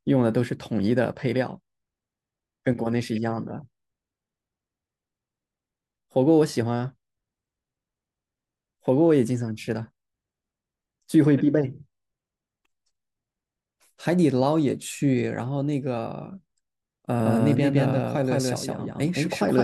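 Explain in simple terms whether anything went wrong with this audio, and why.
Near the end, from 17.24 s to the finish, there's a doubled audio track: the speech plays twice, the second copy about a sixth of a second behind and just as loud. It kicks in abruptly, likely from a slower second recording path or an editing slip.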